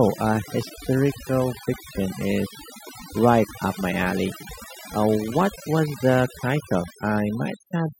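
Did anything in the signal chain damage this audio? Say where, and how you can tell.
Yes. Throughout the speech, the background between phrases drops to near silence flecked with twinkling specks. That is overdone noise removal at the call processing stage. A noise suppressor set far too aggressively cuts individual frequency bands whenever they sit close to its noise estimate, so the quieter parts of the voice are switched off along with the noise. The leftover bands flicker on and off, producing the chirpy residue.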